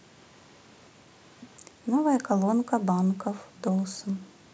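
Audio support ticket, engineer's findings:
Faint delayed copy of the speech trailing 152 ms behind, sitting very low, about 35 dB under the voice: 0.13–1.58 s, plus a brief scrap at 3.77–3.82 s. Echo leak, likely a loudspeaker end whose echo canceller let residual pickup through and sent it back.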